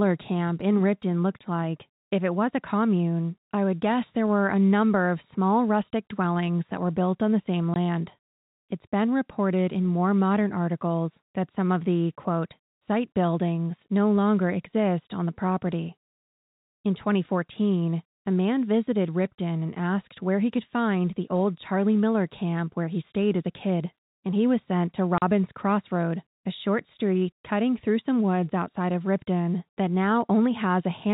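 At 7.74 to 7.76 s and again at 25.18 to 25.22 s the speech drops out completely: packet loss filled with silence. Audio went missing in transit and the receiver inserted silence instead. The 20 ms gap fits one lost packet, and the 40 ms gap fits two. Each hole has abrupt edges. On a waveform these appear as flat lines. A spectrogram shows blank vertical strips with thin broadband lines at their edges, all under the 4 kHz ceiling of the G.711 telephone band.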